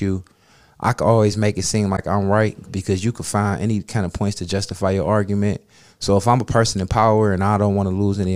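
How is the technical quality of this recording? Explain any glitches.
One glitch stands out in the speech: a corrupt frame concealed by the decoder, from 1.94 to 1.99 s. Over those 54 ms the decoder filled in for the damaged audio. The decoder detected bit errors in the compressed AAC stream and covered them itself, and a gap that long fits about two damaged frames.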